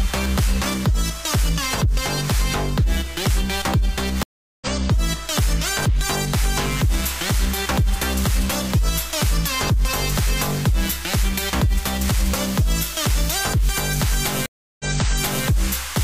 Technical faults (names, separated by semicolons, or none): stream reconnect